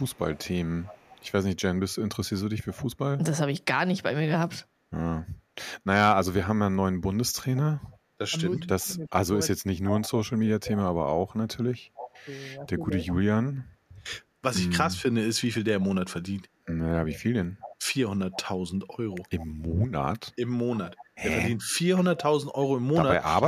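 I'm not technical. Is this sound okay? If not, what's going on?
No. A faint repeat of the voice trails about a third of a second behind, at 0 to 1.3, 7.55 to 8.83, 10.03 to 10.8, 11.95 to 13.14, 15.81 to 19.76 and 20.87 to 21.06 seconds, more noticeable from about 10 seconds on. This is an echo leak, likely from a loudspeaker on the far end whose echo wasn't fully removed.

Between 7.25 and 13.0 seconds the voice drops sharply or cuts out in pieces, about three seconds in all. This is speech suppressed in double talk, likely because both sides spoke at once and the echo remover turned this voice down along with the echo.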